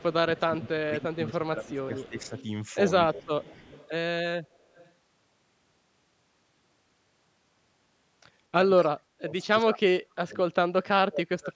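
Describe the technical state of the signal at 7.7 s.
At 7.7 s the speech signal is intact, with no dropout, distortion or other fault, only the ordinary call microphone processing that trims the lowest bass and leaves nothing above 8 kHz.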